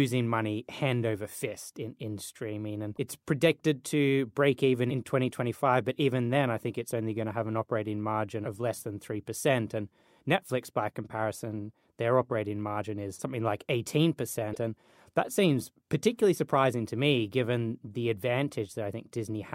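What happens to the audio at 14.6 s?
Damaged data in the compressed stream hits the speech at 14.51 to 14.57 s: corrupted frames throw the decoder out of sync until it finds the next header, giving a brief glitch. A spectrogram shows a broadband smear and a waveform discontinuity.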